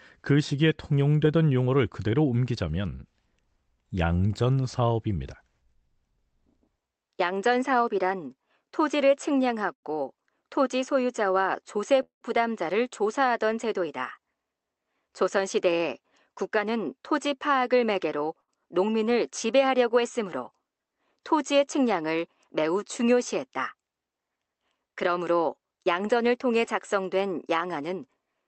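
At 9.73 s the sound hangs for about 0.1 s. The last fragment is drawn out with a slight buzz or dip before the audio picks up where it left off. This is a short stall from a late packet. The jitter buffer emptied while one packet was overdue, and the receiver stretched what it had for 96 ms. Nothing was lost, but the timing slipped by that amount.

From 12.03 to 12.23 s there is a call audio freeze. The sound turns into a fading buzz or hiss and then drops into roughly 120 ms of silence before resuming at the same point. This was likely caused by packets being held up in transit, which left the receiver to fill 180 ms.

Between 14.83 and 17.29 s the audio runs about 6% fast at unchanged pitch and sounds slightly hurried. This is a jitter buffer speed-up. With too much audio queued, the receiver trimmed short pitch-period slices, about 150 ms in all.

A second short stall from a late packet comes at 18.41 s, a 75 ms stretch of the last sound with the same brief hold.

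From 24.76 to 25.88 s another jitter buffer speed-up pushes the pace to about 107%, cutting roughly 100 ms. Through all of this the Opus call path keeps its top end near 8 kHz.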